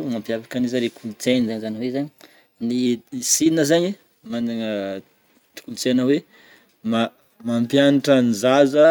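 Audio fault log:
1.49–2.86 s drift correction step: speech runs 5.75% fast and about a semitone sharp, likely a clock-matching rate jump draining a buffer, then snaps back.
6.93–8.85 s drift correction step: speech runs 5.75% slow and about a semitone flat, likely a clock-matching rate jump refilling a buffer, before returning.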